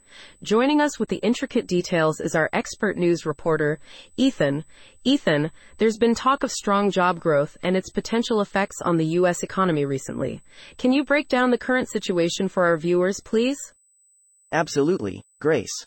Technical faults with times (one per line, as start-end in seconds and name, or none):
0.00-15.87 USB whine
1.05-1.08 AAC frame loss with muting